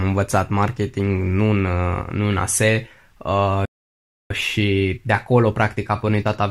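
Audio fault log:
3.65–4.31 s, playback stall: the speech cuts out mid-flow and the output goes fully silent for about 0.65 s before resuming where it stopped. The player likely ran short of buffered data or had its output thread blocked until it recovered.
4.31–6.51 s, time-compressed catch-up: the remaining speech runs about 1.1 times faster at its normal pitch. After the stall, the player works off its backlog by trimming short pieces and cross-fading across each cut.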